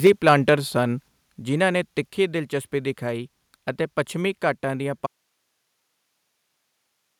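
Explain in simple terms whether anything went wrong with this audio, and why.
Right at the start, from 0.05 to 0.53 s, the loudest parts of the speech have a harsh, crackly, buzzy edge. That is microphone overload. The microphone's input was likely set too high, so the loudest moments went past the most the recording could hold. Their tops were sliced flat, and that flattening is what adds the rough crackle. Only a small share of the sound was cut this way.

Almost immediately, at 0.07 s, the voice and the background both drop a step in loudness at once, rather than easing down. This is the microphone volume stepped down. The calling software likely noticed the overload and turned the microphone's input down in a single jump to stop the distortion. Because it happens in one move, the change is sudden.

From 5.07 s to the very end, the speech suddenly disappears and only a faint hiss remains. 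It is much quieter than the voice was, and it doesn't fade out gently like a pause would. This is an audio dropout to a faint residue. The real sound was likely lost at that point while the rest of the recording chain kept running, so all that came through was its own background hiss.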